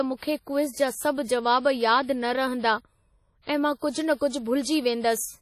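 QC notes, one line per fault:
Throughout, WMA compression: the whole speech clip has that ringing, washy texture, with a hiss that swells and fades along with the speech, and nothing comes through above 14.5 kHz. The damage is heavy, and the likely cause is a transform codec like Windows Media Audio running at a low rate, which fits something around 32 kbps. At that rate, quieter spectral detail gets zeroed out, and the quantisation noise smears across long blocks instead of staying tight to the sound.
3.42 to 3.47 s and 3.79 to 3.83 s, pre-echo: just before two sharp attacks there's a short hiss, about 56 ms long the first time and 40 ms the second, and both onsets come across soft and smeared instead of crisp. That's the same codec at work: each attack lands late in a block, so the noise level set for the loud part also fills the quiet gap leading up to it.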